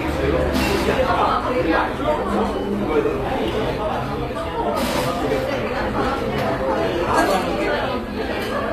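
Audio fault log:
Throughout: HE-AAC compression. The treble is bright but synthetic and grainy, with plainly audible coding damage and nothing above 14.9 kHz. The likely cause is HE-AAC at a low rate, consistent with roughly 24 kbps. Only the lower band is actually coded. The upper band is regenerated by copying lower content upward under a coarse envelope, so its harmonics fail to line up across the crossover. That mismatch gives the top end its metallic, artificial edge.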